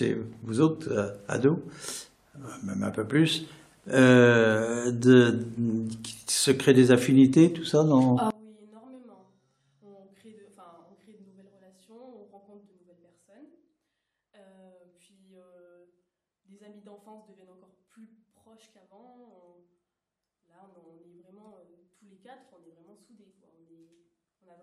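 From 8.31 s to the end, the sound collapses when heard in mono, dropping by about 25 dB. That points to one channel inverted, with one side's polarity likely flipped, so everything the two channels share cancels on summing. What survives is just the difference between them: the centred material and low end all but disappear, leaving a faint residue where the solid middle used to be.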